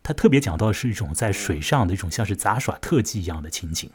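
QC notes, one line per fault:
No technical faults were heard in the signal, which holds steady from the first sample to the last.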